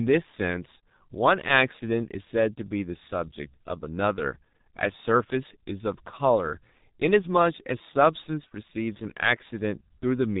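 From start to finish, the speech carries heavy G.723.1 codec damage. Nothing survives above about 3.8 kHz, so the sound is muffled and dull. The codec chops the signal into long frames and refreshes its model of the voice only slowly. Fast changes get smeared as a result. Consonants blur together and lose their edges. The voice takes on a rough, hoarse grain, which fits a bitrate of around 6 kbit/s.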